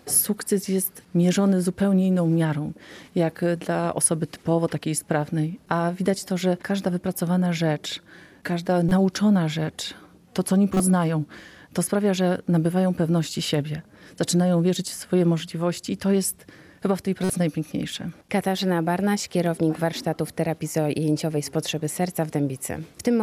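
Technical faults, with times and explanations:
8.89–8.92 s, 10.74–10.80 s and 17.24–17.30 s: corrupt frame decoded. Each one is a quick chirpy blip that pokes out at a peak of about -10 dBFS. Some bits in a compressed frame got flipped and the decoder played the frame anyway. It misread gains and codes and dropped energy at the wrong frequencies for the length of the damaged frame. The first blip covers one frame and the later two span about two, so they last a bit longer.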